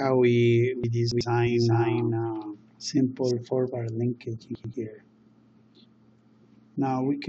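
Chunks out of order, 0.84 to 1.21 s: a block of audio about 93 ms long plays three blocks later than it should, so the passage comes out scrambled. Nothing is missing, but the sound jumps backward and forward across three hard joins, and the moment sounds jumbled rather than smooth.

Doubled audio track, 1.47 to 3.31 s: a second, full-band copy of the sound runs about 0.4 s behind the original and about 5 dB quieter. It has no reverberant tail or room colouring, so it sounds like a dry, distinct repeat rather than an echo. It switches on and off abruptly at both ends. The likely cause is the signal being picked up a second time through a slower path and mixed back in.

Chunks out of order, 4.55 to 4.74 s: another block of about 93 ms arrives one block late and swaps places with its neighbour, producing a brief jumbled moment.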